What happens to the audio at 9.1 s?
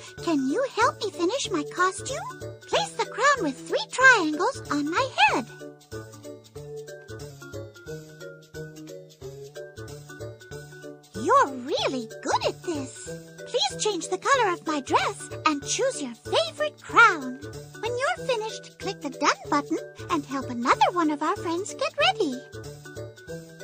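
At 9.1 s the audio is inside a drift correction step running from 7.3 s to 9.49 s. Playback slows by about 5.5% and pitch drops by nearly a semitone (about 98 cents), then snaps back at 9.49 s. The likely cause is clock-matching software changing the rate in one jump to rebalance its buffer. On a spectrogram every harmonic steps down together at 7.3 s and jumps back up at 9.49 s, and the waveform looks slightly stretched in between.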